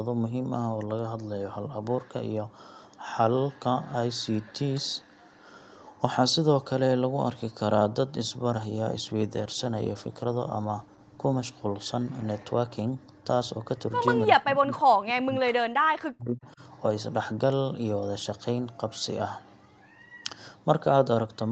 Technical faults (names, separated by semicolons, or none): call bitrate drop; speech suppressed in double talk